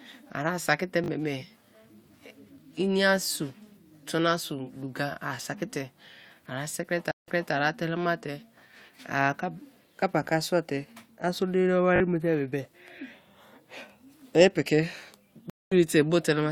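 Twice in this speech clip, fresh audio failed to reach the playback device in time, so it replayed its last 20 ms buffer two extra times. This repeated buffer fault shows up as a quick hard-edged stutter, almost a brief buzz, at 1.04 to 1.08 s right after "saki te" and again at 11.96 to 12.00 s after "so diri dawo", just before "ma te". Each time, about 40 ms of the real signal is skipped. Twice more, the network connection dropped and the player reconnected, restarting its decoder mid-stream. This stream reconnect fault produces 164 ms of silence after "ara sikri te" in the span from 7.11 to 7.54 s. The sound then picks up 260 ms earlier than where it broke off, so a short stretch is heard again before "ara telema". At 15.50 to 15.74 s a 216 ms gap follows, and the audio resumes a little later, losing a sliver of material.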